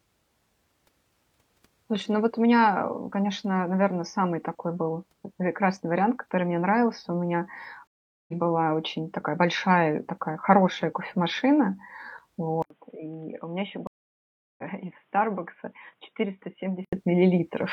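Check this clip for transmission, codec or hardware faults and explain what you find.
Three faults stand out in this speech: two stream reconnects and a switch to a poorer input device.

Stream reconnect, at 7.87–8.33 s and again at 13.87–14.64 s: the connection dropped and a fresh decoder started mid-stream. The sound goes silent for 410 ms, then 711 ms, and resumes roughly 400 ms, then 500 ms, later in the speech. That skip forward, rather than a plain pause, sets it apart from an ordinary dropout.

Input switched to a poorer device, from 12.62 s to 16.93 s: after an 80 ms gap the sound turns dull, with nothing above 3.8 kHz. It also falls by about 10 dB, and new background noise appears about 40 dB below the signal, likely from a different microphone or a headset's call profile. A codec change would narrow the band without also shifting the level and noise floor.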